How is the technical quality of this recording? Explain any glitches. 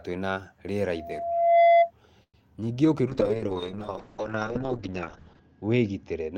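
The recording has four separate technical faults, and from about 3 s onward the speech is noticeably degraded until the end.

Loudspeaker feedback squeal, 0.93 to 1.91 s. The microphone is picking up the loudspeaker it feeds, and at 681 Hz the loop gain goes above one. That frequency reinforces itself on each trip around the loop, so a pure tone swells over roughly 0.7 s until it sits about 10 dB above the speech. It ends at 1.91 s.

Call audio freeze, 2.23 to 2.36 s. The speech stalls for about 103 ms. The receiver first stretches the last sound into a fading buzz and then falls silent for around 70 ms before the speech resumes exactly where it left off. Nothing is lost, but everything afterwards arrives about 103 ms late. The likely cause is packets held up in transit, which left the jitter buffer empty with nothing to play.

Short concealed packet loss, 2.62 to 2.64 s. About 20 ms of audio never reached the decoder in time. 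Almost none of that gap was concealed, so the audio there is skipped rather than smoothly filled. A very short sound at that point could vanish entirely. Playback then closes the hole, pulling the timing back by roughly 20 ms.

Call bitrate drop, 3.08 s to the end. The bandwidth estimate fell, and the encoder went from 32 kbps down to 7 kbps, staying at the lowest rate for about 2.3 s. At that rate Opus codes far more coarsely and narrows the audio band from 20 kHz to 8 kHz. The speech turns muffled and rough, with watery artefacts, and loses its crisp high-frequency detail.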